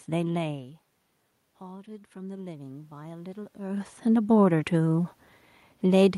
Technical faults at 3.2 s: automatic gain rising

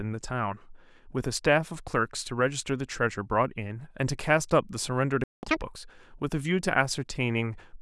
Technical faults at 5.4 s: playback stall; catch-up at higher speed

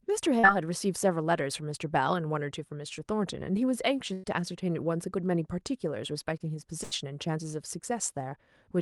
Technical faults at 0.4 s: short concealed packet loss

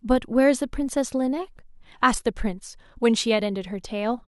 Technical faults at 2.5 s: none

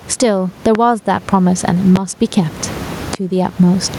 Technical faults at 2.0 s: gain pumping; loud pop

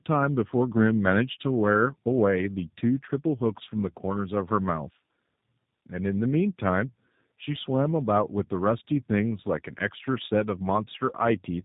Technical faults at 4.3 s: tandem speech coding

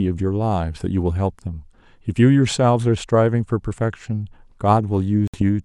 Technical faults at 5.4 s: Bluetooth dropout

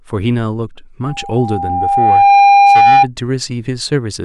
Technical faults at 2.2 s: loudspeaker feedback squeal

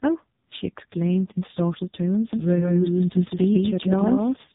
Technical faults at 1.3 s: AMR narrowband mobile codec

